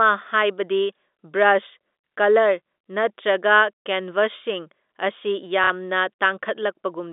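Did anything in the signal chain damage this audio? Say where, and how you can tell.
Yes. There is packet loss with the last packet repeated at the network stage, from 5.64 to 5.70 s. For about 60 ms the receiver had nothing new to play, so it replayed the last audio it held. Such repeats seldom line up with the speech's pitch period, and the short run comes out as a brief robotic stutter. The length fits two lost 30 ms packets. The G.711 telephone band, roughly 250 Hz to 3.6 kHz, carries on around it.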